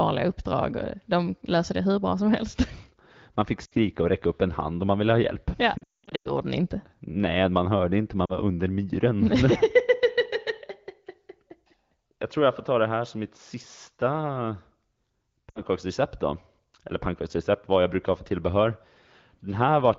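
Speech over an AMR-WB call with lost AMR speech frames: brief dips at 3.65–3.74 s (before "och räcka upp en"), 8.25–8.33 s (between "man hörde inte man" and "under myren") and 15.49–15.61 s. Between 5.78 and 6.3 s, before "ni inte", there's a scattered burst where a run of about 200 ms drops to near silence as the decoder reuses the last good frame with falling gain.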